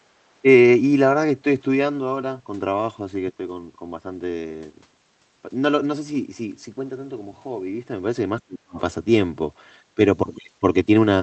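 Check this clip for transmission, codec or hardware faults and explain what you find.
Speech suppressed in double talk occurs twice, from 8.4 to 8.77 s and again briefly from 9.95 to 10.0 s. Both sides were likely talking at once, so the echo canceller could not tell this talker from loudspeaker echo and attenuated everything. In the first event the speech plunges by roughly 40 dB. The second is a shallower dip of about 15 dB lasting around 50 ms.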